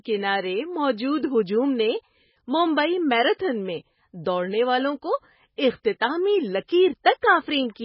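Across the whole speech clip the sound has MP3 compression damage, likely from encoding at a very low bitrate, which fits a setting around 16 kbps. Nothing is present above 5.6 kHz, so the treble is cut off flat and sibilants lose their edge. The encoder is starved of bits and drops weak frequency lines that then come and go between frames. That leaves a heavy watery, swirling texture over the speech and softens the onsets of sounds.

Pre-echo occurs at 5.56 s, 5.99 s and 7.04 s. Each time, a sharp onset sits late within a transform block. The quantisation noise the codec sized for that loud onset is spread across the whole block, so it also fills the quiet moment just before it. A short hiss leads each attack by 17 ms, 14 ms and 16 ms respectively, and the attacks themselves sound smeared rather than crisp.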